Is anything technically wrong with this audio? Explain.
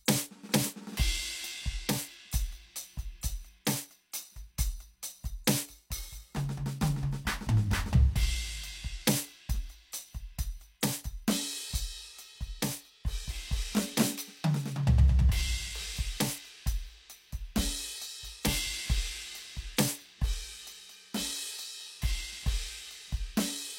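Yes. At 10.81 s in this music, a sharp attack arrives softened, with a brief hiss leading into it that spreads about 18 ms ahead of the hit. That is pre-echo. A transform codec encodes audio in blocks and spreads the quantisation noise across each whole block. Here the attack lands late in its block, so noise sized for the loud onset also spills into the quiet instant before it, smearing the transient.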